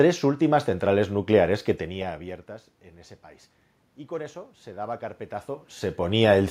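Nothing stood out on listening; the room noise belongs to the recording, and the changes in level early on and again near the end sound like the talker shifting position relative to the microphone.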